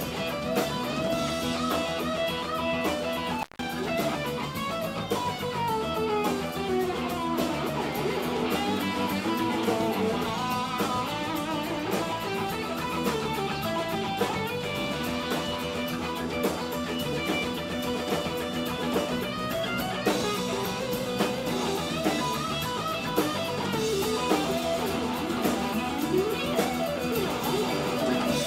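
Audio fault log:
3.40–3.63 s, intermittent contact: a loose plug or cable connection briefly opens, and the signal drops out for about 163 ms, leaving only faint hiss. Crackle at the break and again where the contact closes marks the edges. On a waveform the trace collapses to a thin noise band between two spiky bursts. A spectrogram shows vertical broadband streaks at each edge around a near-empty gap of low-level noise.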